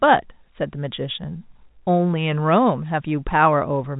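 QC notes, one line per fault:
Nothing to flag here: the speech comes over G.711 telephone coding, topping out around 3.8 kHz as that format does, and there's no fault to note.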